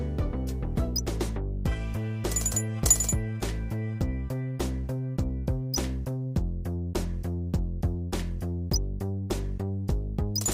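No technical faults can be heard anywhere in the recording.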